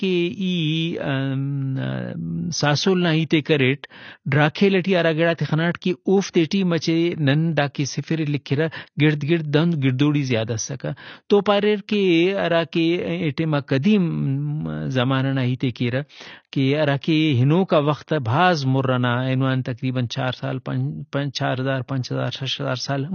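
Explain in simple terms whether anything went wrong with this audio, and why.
AAC compression damage runs through the whole recording, from start to finish. The speech sounds dull and smeared, with a watery, fizzy edge on hissing sounds, and nothing at all comes through above about 6.5 kHz. The likely cause is squeezing the file too hard with an AAC encoder: to save space, it discards the highest frequencies entirely and codes the rest so coarsely that small gaps and swirling artefacts become audible.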